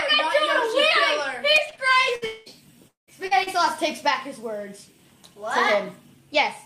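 From 1.51 to 1.79 s there is repeated packet loss, which gives the sound a robotic quality. Four separate holes open in under 0.3 s, the longest about 21 ms, and together they remove about 80 ms of audio. The receiver bridges each one by extending the preceding sound, so concealment covers roughly 28% of that span. The result is a choppy stutter with small pieces missing.

At 2.15 s comes a burst of packet loss lasting to 2.24 s. About 60 ms in a row failed to arrive in time. The receiver extends the last sound and lets it decay, so it comes out as a short held buzz or fading hiss. Playback then resumes further on, with that stretch absent.

Two longer gaps follow, each sounding like a long network dropout, likely caused by the stream stalling for about 200 ms at a time. In the first, from 2.26 to 2.48 s, the fill runs the whole length, so a smeared, drawn-out continuation is heard instead of silence. 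In the second, from 2.88 to 3.09 s, the extended sound dies away and about 0.13 s of silence remains before the audio returns. Both times the lost material is simply gone.

Finally, short concealed packet loss occurs at 3.27 to 3.33 s and again at 3.43 to 3.49 s, each about 40 ms that arrived too late for the decoder. The gap is filled by continuing the preceding sound and blending back into the real signal, which is heard as a brief smear or wobble in which a short sound can drop out.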